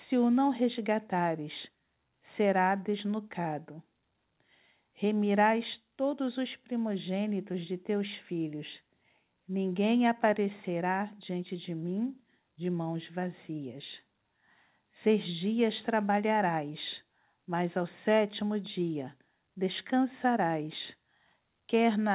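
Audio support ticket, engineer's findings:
Engineer's findings: no faults found in the speech, which comes through the WebRTC call path on G.711 A-law at 64 kbps with nothing above 4 kHz, as expected for that codec.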